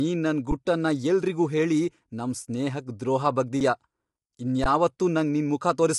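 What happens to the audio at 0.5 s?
At 0.51 s the sound briefly freezes in an underrun with a held sample, just before "ಗುಟ್ಟನ್ನ ಎಲ್ರಿಗೂ ಹೇಳಿ ನಮ್". For about 11 ms, which fits a 512-sample buffer, the output ran dry and the converter held its last value. The waveform becomes a flat line, with a blank vertical stripe on a spectrogram. No audio is skipped, so playback resumes where it stopped, and the break is only a soft tick, not a sharp click.

Across this moment, as throughout, the speech sounds rough and grainy, likely from low-delay AAC compression (AAC-ELD) at about 32 kbps. Its short frames resolve pitch harmonics poorly, so noise fills the gaps between them and the top band is thinned. On a spectrogram the harmonic lines look smeared with speckle between them, and nothing appears above 11.6 kHz, where the energy cuts off cleanly.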